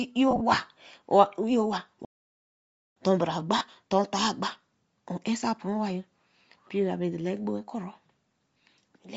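Across the whole speech clip the voice carries a breathy, grainy edge, with the upper spectrum sounding hollow and filled with hiss rather than real detail. This is most likely Bluetooth LC3 compression. The LE Audio transform codec, working in 10 ms frames at what sounds like a bitrate near 32 kbps, discards much of the high-frequency content and substitutes shaped noise, which is clearly audible here.

From 0.31 to 0.41 s the speech breaks into a brief noisy smear. Short gaps are scattered over about 100 ms, the longest around 30 ms, for roughly 60 ms lost in total. That fits six dropped 10 ms frames. These are lost LE Audio frames: the LC3 decoder filled each gap by replaying the previous spectrum with randomised signs, so pitched sound turns to textured noise instead of silence.

At 2.05 s the audio cuts out completely and stays silent until 2.96 s, a gap of 0.91 s, before carrying on. 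This is a playback stall, most likely the player running short of data or having its output thread blocked, so nothing reached the output until it recovered.

At 3.58 to 3.61 s another lost-frame event, about 30 ms long, leaves a short, rough smear in the speech, consistent with three missing frames concealed the same way.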